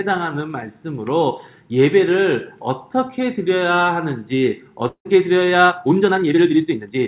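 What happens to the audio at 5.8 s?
At 5.8 s the audio is inside a time-stretched section, from 5.63 s to the end at 7.08 s. The pace suddenly runs 1.71 times faster, yet the pitch holds. It sounds rushed. Software likely dropped short pieces to shorten it while keeping the pitch.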